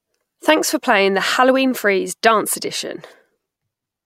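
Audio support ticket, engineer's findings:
No technical faults found in the speech signal on review; no defects identified in capture, processing or playback path.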